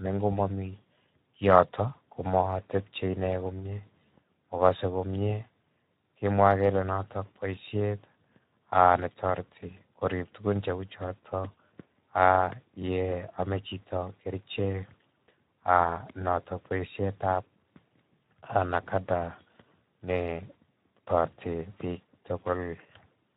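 Low-rate CELP encoding through the Speex codec runs across the whole of this speech recording, and the damage fits a bitrate around 11 kbps. With so few bits left to code the excitation signal, the voice comes out plainly noisy and hoarse from start to finish.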